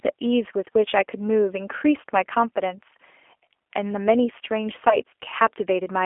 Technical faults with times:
0.00-6.05 G.729 codec
4.89-5.00 VoIP packet loss concealed by the speech codec

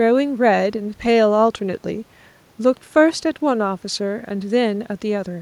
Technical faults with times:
none

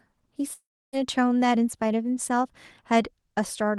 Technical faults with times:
0.53-0.95 long network dropout

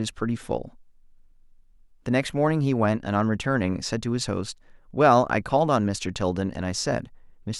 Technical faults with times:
none

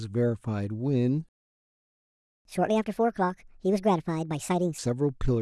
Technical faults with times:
1.29-2.45 playback stall
2.45-4.78 catch-up at higher speed

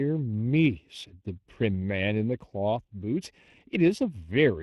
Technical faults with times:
0.00-4.62 channel delay (comb filtering)
0.00-4.62 Speex codec

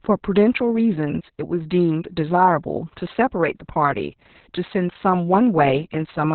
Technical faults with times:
0.00-6.34 Opus voice compression

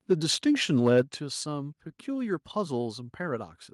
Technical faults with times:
0.11-0.13 microphone overload
0.75-1.00 microphone overload
1.02 microphone volume stepped down

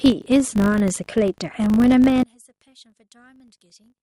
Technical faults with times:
0.00-4.03 filter restarted on every block
2.23-4.03 one channel inverted

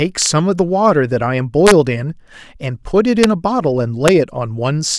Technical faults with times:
0.22-0.26 integer overflow
1.67-1.71 integer overflow
3.23 integer overflow
4.08 integer overflow

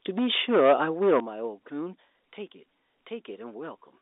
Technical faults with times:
0.09-1.20 microphone overload
0.19 microphone volume stepped down
1.20 microphone volume stepped down
2.22 microphone volume stepped down

